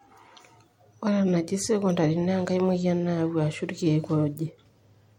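No technical faults can be heard in this speech recording. Nothing in the signal calls for comment at any point.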